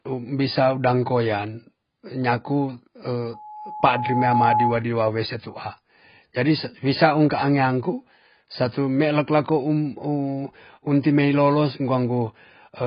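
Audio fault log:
Throughout, AAC compression: the speech sounds dull and smeared, with nothing at all above 5 kHz and a heavy, warbly, fizzy texture on sustained sounds and sibilants. That's likely an AAC-LC encode starved of bits, which fits something around 16 kbps. At that rate the encoder lowers its cut-off to save data, then leaves gaps or substitute noise in the bands it can't afford to code properly, so the detail goes swirly.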